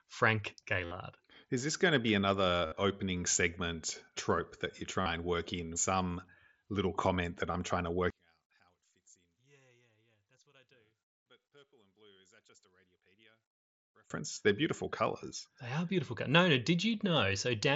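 Concealed Bluetooth headset packet loss hits at 0.85 s and 2.66 s (60 ms each), 5.01 s after "segment trope that you" (45 ms), and 7.52 s after "little comment that" (22.5 ms). Each gap is filled by repeating the last waveform stretch, giving a brief buzzy tone that appears as periodic, evenly striped spectrogram columns. From 8.10 to 14.10 s, just after "trying to", the speech drops by about 35 dB to a faint residue, likely from one channel inverted cancelling the centre in mono; the waveform visibly collapses. A final 22.5 ms concealed loss comes at 14.34 s.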